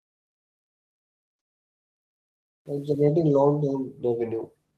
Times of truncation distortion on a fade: 0.00-3.04

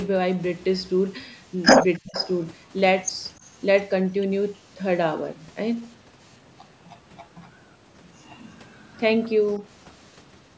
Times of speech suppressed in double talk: 1.99-2.17

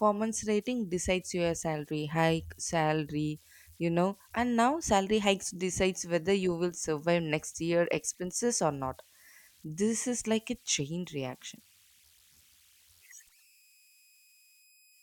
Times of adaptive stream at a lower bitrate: none

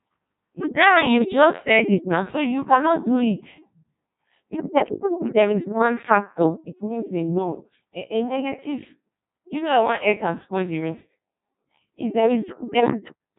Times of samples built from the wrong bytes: none

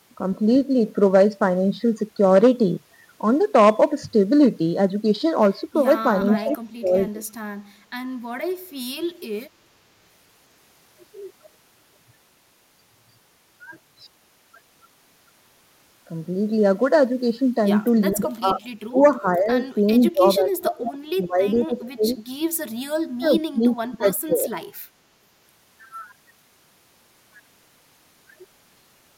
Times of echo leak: 18.13-18.68, 19.94-20.08, 21.85-22.15

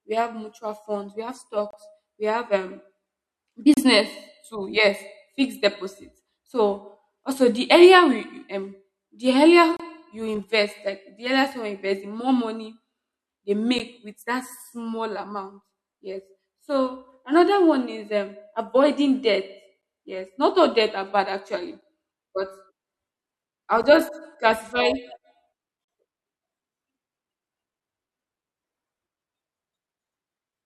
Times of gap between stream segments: 1.71-1.73, 3.74-3.77, 9.77-9.80, 13.79, 19.81, 23.83, 25.84-25.88

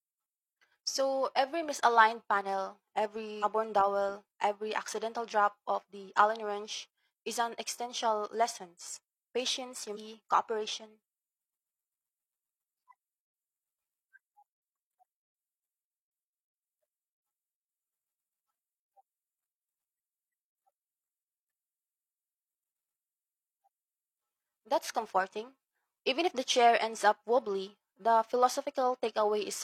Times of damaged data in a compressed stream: 3.39-3.44, 9.92-9.97, 22.59

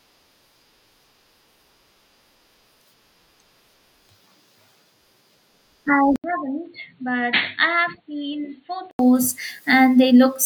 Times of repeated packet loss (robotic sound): none

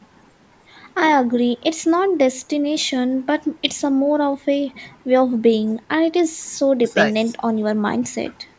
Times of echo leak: none

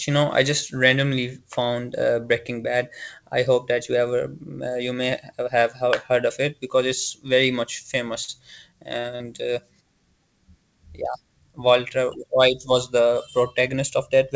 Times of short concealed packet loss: 8.24-8.31, 9.00-9.23

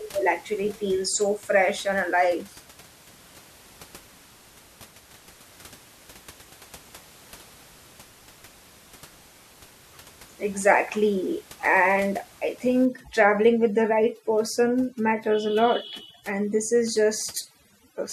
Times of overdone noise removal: 12.85-18.12

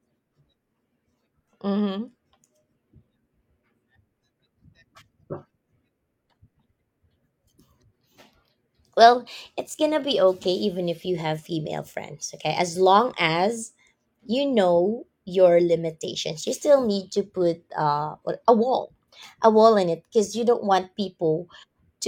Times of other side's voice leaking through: none

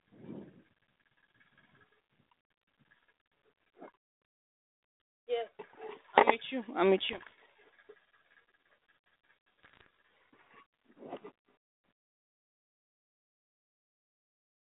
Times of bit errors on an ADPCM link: 6.98-7.31, 9.63-9.86

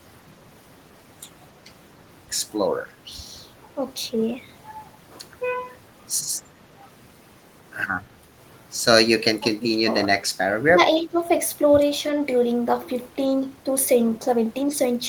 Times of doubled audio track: none

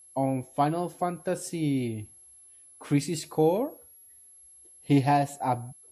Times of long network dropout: none

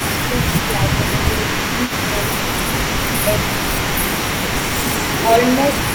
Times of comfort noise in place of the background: none

